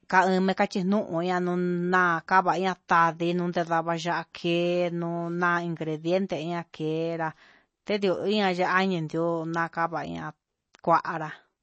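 From start to finish the speech carries plainly audible MP3 compression. Nothing reaches above 8.3 kHz, and the s sounds have a watery, swirling quality as weak frequency lines drop in and out between frames. That flicker sets it apart from a simple low-pass filter, which would only dull the sound. The damage fits a low bitrate near 32 kbps, where the encoder has likely run short of bits and had to discard detail.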